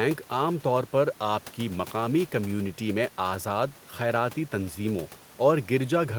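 Speech recording with no technical faults; the room's background noise sits about 26 dB below the speech.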